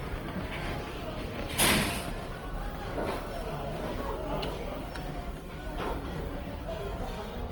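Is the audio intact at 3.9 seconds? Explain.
No, not really. At 3.9 seconds, as across the whole clip, there's plainly audible damage that's likely Opus compression in its CELT music mode. When bits run short, the encoder keeps each band's energy but fills in detail by folding lower bands upward or injecting noise, so tonal parts come out rough and grainy rather than swirly. The range still reaches about 20.4 kHz, and the overall grit fits a rate around 24 kbps.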